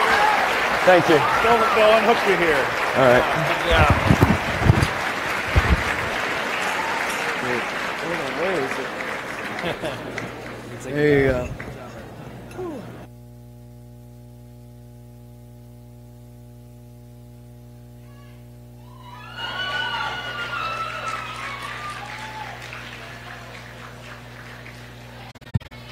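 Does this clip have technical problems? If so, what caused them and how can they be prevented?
Yes. From 9.81 s to the end there is mains hum: a steady 60 Hz tone about 20 dB below the signal, from a ground loop or nearby transformer. On a spectrogram it is a thin unbroken horizontal line at 60 Hz. Balanced cabling, a single ground point and distance from power supplies prevent it.

Between 25.30 and 25.72 s there is AAC frame loss with muting. About 256 ms of audio, roughly a dozen frames, vanishes in scattered gaps over 405 ms, the longest around 40 ms. The decoder zeroed those frames' spectrum, and the overlapping windows fade each gap out and back in. The waveform shows soft-edged dips to near silence, and the spectrogram shows blank vertical strips across all frequencies. A more reliable transport with error protection or retransmission would prevent the loss.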